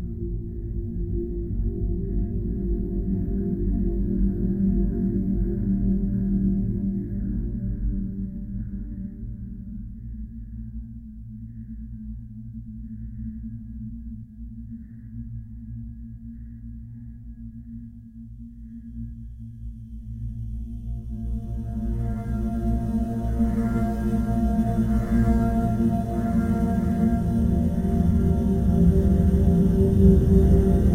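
Right through the clip there's sample clock jitter: the converter's clock wobbles by somewhere around a microsecond or two, so each sample lands a touch early or late. That puts a faint hiss, roughly 55 dB down, riding on loud, bright passages and disappearing in quiet gaps.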